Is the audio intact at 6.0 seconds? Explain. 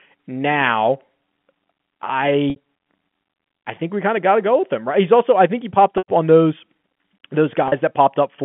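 No, there's packet loss with pitch repetition from 5.98 to 6.08 s, right after "I think he popped". About 100 ms went missing, which fits five 20 ms packets. The receiver loops the last pitch period, which buzzes, fades to silence, then cross-fades back into "on those".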